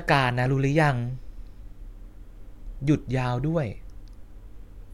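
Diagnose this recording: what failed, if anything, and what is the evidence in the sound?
Two sharp single clicks at 0.53 s and 3.19 s are likely dropped samples at the driver or buffer stage. A fraction of a millisecond is lost, so the waveform jumps.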